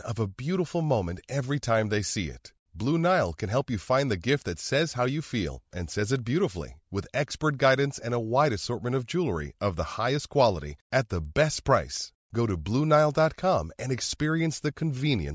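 From 10.5 s to the end, the resampler restarted on every block: each 250 ms block was converted from 44.1 kHz to 16 kHz in isolation, leaving small edge errors heard as ticks at 4 Hz.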